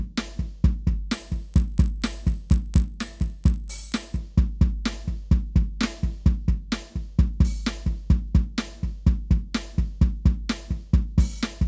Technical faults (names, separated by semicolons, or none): resampler restarted on every block